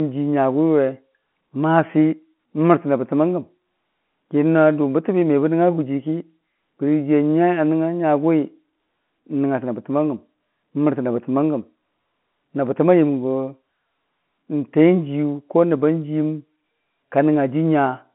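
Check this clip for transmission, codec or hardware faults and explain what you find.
Nothing faulty can be heard in this recording.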